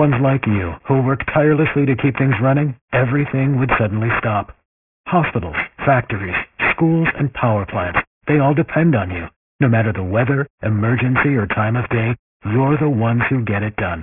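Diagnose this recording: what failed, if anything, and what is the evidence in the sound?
Sample-rate conversion without anti-alias filtering, consistent with 48 kHz down to 6 kHz, causes aliasing throughout: speech energy above 3 kHz folds back, leaving metallic, gritty sibilants.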